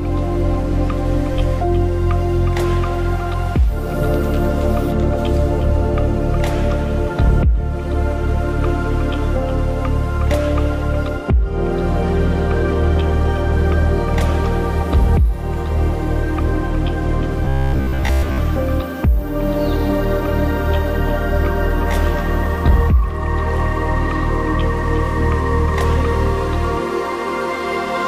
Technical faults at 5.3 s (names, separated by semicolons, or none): none